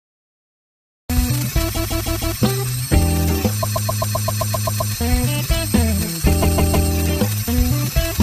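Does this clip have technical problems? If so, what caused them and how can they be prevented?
Yes. Cut-off start: digital silence runs from 0 to 1.10 s, then the sound begins abruptly mid-event with no attack, because capture started late. Start recording before the source begins, with pre-roll.

Repeated frames: a short block loops as a stutter at 1.74 to 2.37 s (157 ms, four extra plays), 3.62 to 4.93 s (131 ms, ten extra), and 6.42 to 6.89 s (157 ms, three extra). This adds about 2.4 s in total and fits a run of five or six compressed frames being resent or rewritten. Deduplicate frames by sequence number or timestamp before decoding or writing.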